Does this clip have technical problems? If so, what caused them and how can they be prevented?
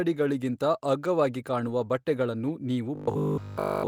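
Yes, there are two kinds of fault here.

First, a lost packet rebuilt from error correction, twice: around 1.67 to 1.69 s and 2.47 to 2.49 s, each a 20 ms patch. The packets went missing, but the next packet carried a low-bitrate backup copy, so the decoder filled the hole with no gap. Those short stretches just sound a bit rougher and grainier than the speech around them. To prevent it, fix the packet loss on the network side, for example with a wired connection or by prioritising the call's traffic.

Second, robotic sound from repeated short buffers, from about 2.95 s right to the end. The speech turns into a stiff, metallic buzz locked at 50 Hz that only loosely tracks what's being said, and essentially the whole stretch is repeated audio. The likely cause is new audio arriving too rarely, with the playback side looping the last 20 ms chunk (one over 50 Hz) while the real audio gets skipped. 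To prevent it, give the audio thread enough CPU headroom and use a jitter buffer deep enough that playback never runs dry.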